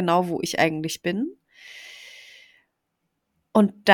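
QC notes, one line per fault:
No faults found; the signal holds steady throughout, with nothing audible in its technical state that calls for a note.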